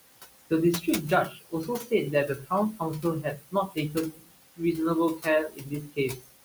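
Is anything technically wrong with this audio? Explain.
Yes. Noise suppressor artifacts run throughout. The suppressor pulls steady noise down by about 20 dB frame by frame, so the background sinks in pauses and surges back under speech.

Speech cut by the noise suppressor occurs at 1.29–1.92 s, 2.28–2.51 s, 3.22–4.36 s and 5.49–6.3 s. The suppressor mistook quiet speech for noise and turned it down, by about 18 to 22 dB at worst. Across each span, roughly 0.15 to 0.5 s sounds swallowed or faint. The room noise sits about 13 dB below the speech.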